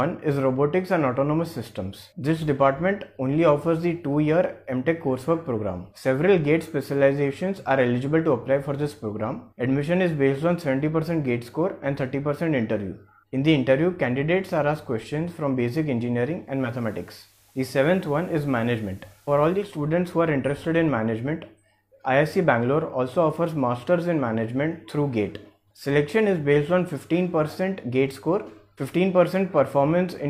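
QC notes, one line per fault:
16.39–19.97 s: digital radio blending to analogue, a half-second cross-fade to FM brings up hiss about 35 dB down and a roughly 1 dB level drop, then back.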